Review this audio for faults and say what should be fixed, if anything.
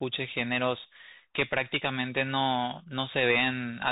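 Bluetooth CVSD headset codec damage runs through the whole speech recording. The spectrum stops at about 3.8 kHz, giving the boxed-in telephone sound of a narrowband headset link. The damage is plainly audible. CVSD sends a single up-or-down bit per sample, consistent with a 64 kbps stream, and its adaptive step cannot keep pace with fast, loud high-frequency content. Sibilants come out scratchy, and a granular hiss sits beneath the speech. To prevent it, record from a wired microphone or a headset running a wideband profile instead of the CVSD hands-free link.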